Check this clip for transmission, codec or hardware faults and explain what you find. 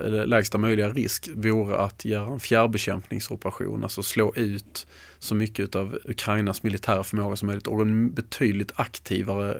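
No transmission, codec or hardware faults are audible here.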